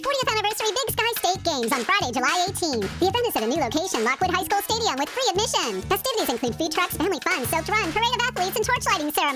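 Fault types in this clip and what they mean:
Wrong sample rate: the audio is being played back faster than it was captured, with no rate conversion in between, and the ratio fits material recorded at 22 kHz being clocked out at 32 kHz. Because speed and pitch are locked to the same clock, everything runs about 1.45 times too fast and sits roughly six and a half semitones too high for the whole clip, giving the sound a hurried, squeaky, shrunken character with no point where it settles back to normal.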